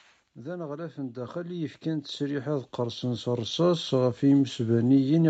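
From 0.34 s to 4.03 s the speech shows automatic gain rising: the level climbs steadily by about 18 dB over nearly four seconds. The gain control judged the input too quiet and kept adding gain, so the voice and the background noise floor swell together rather than the voice alone getting louder. Throughout, the audio has nothing above 8 kHz, consistent with the call codec's bandwidth.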